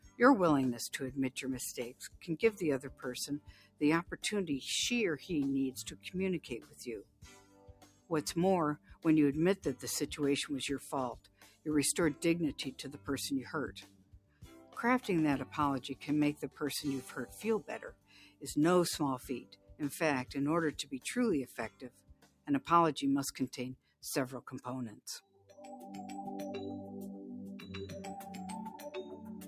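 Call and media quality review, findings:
Noise suppressor applied to music or sounds, whole clip. A speech-tuned suppressor is reading sustained content and ambience as noise; gain swings by roughly 15 dB, so held sound and tails sink while onsets pass, giving audible pumping and thinning.

Sound cut by the noise suppressor at 0.00–4.17 s, 5.79–25.58 s, and 29.11 s to end. Deepest drops about 16 dB in the first two spans, about 5 dB in the last. Sustained and decaying parts attenuated, about a second and a half, then seven seconds, then a fifth of a second in total.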